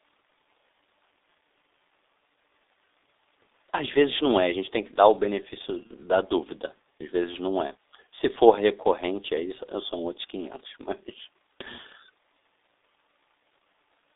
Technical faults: G.723.1 codec; VoIP packet loss concealed by the speech codec

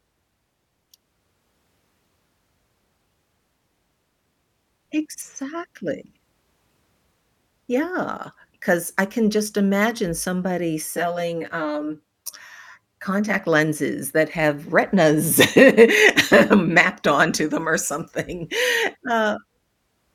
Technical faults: channel delay (comb filtering)

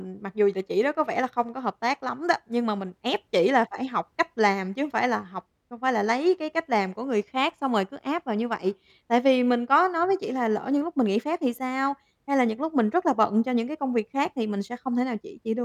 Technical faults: none

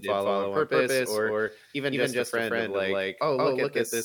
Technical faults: doubled audio track

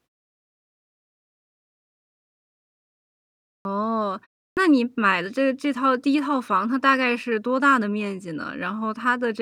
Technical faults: clipped start after a pause

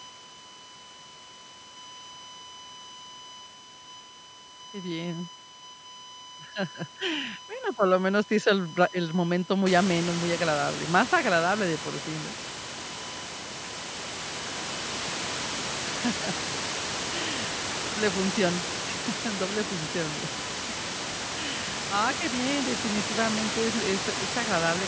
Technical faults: USB whine

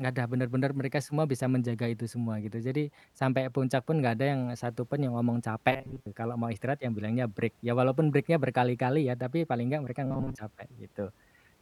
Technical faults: robotic sound from repeated short buffers

